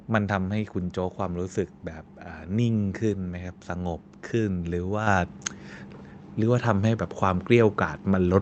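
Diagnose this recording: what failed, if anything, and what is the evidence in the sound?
At the call-processing stage, the microphone volume stepped up twice. At 5.07 s the whole signal jumps about 5 dB, and at 8.34 s about 2 dB more. Speech and background rise together, instantly. Automatic gain control raised the device input level in discrete steps.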